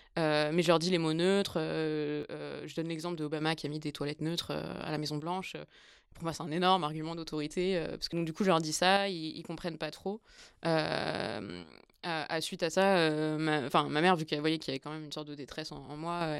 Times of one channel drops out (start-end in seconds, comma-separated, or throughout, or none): 2.23-3.41, 5.20-7.27, 8.97-10.38, 11.63-12.73, 14.77-16.21